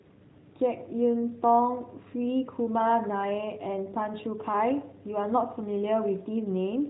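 Speech over a narrowband mobile codec, with no faults.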